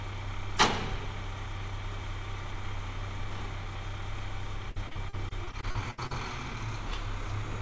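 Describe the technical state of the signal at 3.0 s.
At 3.0 s the signal is intact: no fault is audible, and the sound carries only the call path's normal band limit, with nothing above 8 kHz.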